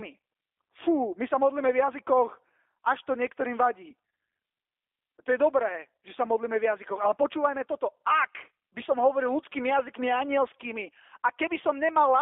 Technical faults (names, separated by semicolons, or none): G.729 codec